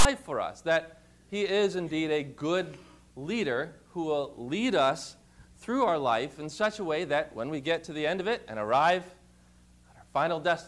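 From 0.00 to 0.05 s, the clip opens with file tags played as audio. A block of text metadata at the head of the file has been decoded as if it were sample data. Text bytes fall in a narrow range of values, so the waveform sits well off centre. The result is a loud, harsh rasp lasting about 50 ms. It starts and stops with hard edges, like a sudden burst of static, before the real audio begins.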